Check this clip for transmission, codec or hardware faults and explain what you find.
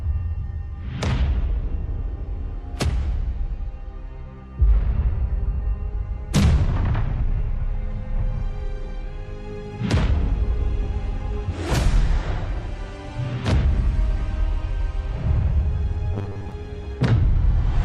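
One fault is present: robotic sound from repeated short buffers, from 16.14 to 16.52 s. The audio becomes a rigid, metallic buzz at 100 Hz. The likely cause is late-arriving data, with a roughly 10 ms buffer replayed over most of that stretch while real audio is skipped.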